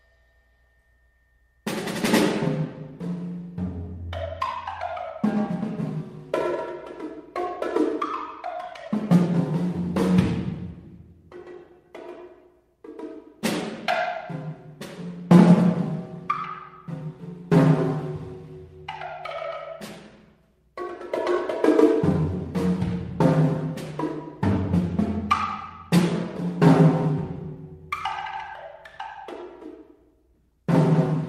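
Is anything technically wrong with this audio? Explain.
No, nothing technically wrong turns up here; the audio simply runs along without any problems worth pointing out.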